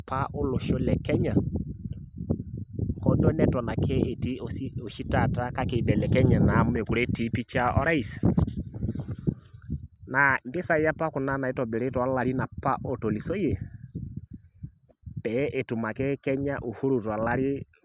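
No technical faults can be heard anywhere here.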